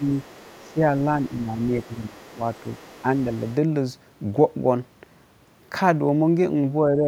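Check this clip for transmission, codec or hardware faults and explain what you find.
Two echo-cancellation faults affect this speech.

Speech suppressed in double talk: at 0.0–0.07 s, 0.6–0.91 s, 1.14–2.18 s and 6.88–7.07 s the talker dips by around 10 dB, less at the end. The likely cause is the echo canceller turning down both voices when both sides spoke at once.

Other side's voice leaking through: a faint second voice sits well below the talker at 0.08–0.74 s, 1.22–1.43 s and 1.59–3.55 s. It is likely loudspeaker echo the canceller failed to remove.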